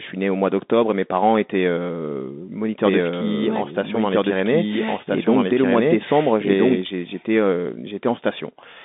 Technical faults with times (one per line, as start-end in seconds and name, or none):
0.00-8.85 Bluetooth CVSD headset codec
2.84-6.82 doubled audio track